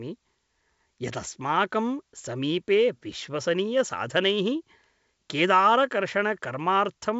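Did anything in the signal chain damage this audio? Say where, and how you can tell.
No, nothing damaged this audio.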